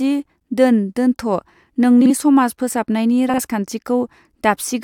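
Frames out of order occur in the speech at 2.01 to 2.11 s and again at 3.29 to 3.38 s. Each time, two adjacent blocks of about 43 ms, each consistent with a pair of coded frames, were swapped before decoding, so roughly a tenth of a second plays with its halves exchanged. The result is a brief garbled flutter, and no time goes missing.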